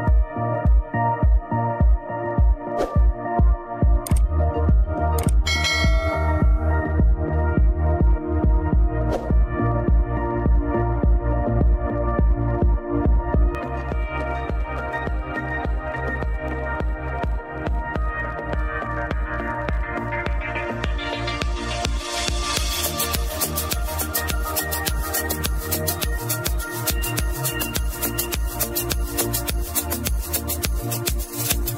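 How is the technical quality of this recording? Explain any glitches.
The recording has one fault. From 13.55 s to the end, pre-emphasis is left on. The treble was boosted before recording or transmission, and the matching de-emphasis on playback was never applied. The tilt lifts 10 kHz by about 11 dB relative to 1 kHz, and its shape fits a J.17 curve. From that point the sound turns thin and over-bright, with hard, exaggerated sibilance.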